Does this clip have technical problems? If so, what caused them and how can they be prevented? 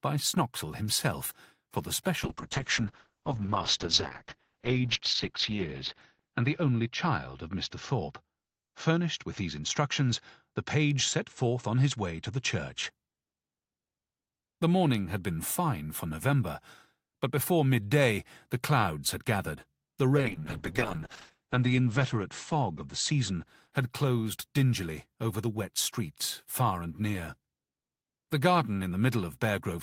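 Yes. A call bitrate drop occurs from 2.24 to 12.97 s and again from 20.18 to 25.45 s. The bandwidth estimate fell, so the encoder coded more coarsely and narrowed the audio band from 20 kHz to 6 kHz, then to 8 kHz in the second drop. The audio turns muffled and rough, worst for 3.4 s and 1.19 s, respectively, which fits a rate of roughly 48 falling to 7 and 8 kbps. A more stable network connection, or reserving uplink capacity for the call, prevents this.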